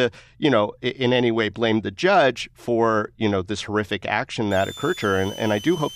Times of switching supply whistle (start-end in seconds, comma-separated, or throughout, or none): 4.51-5.96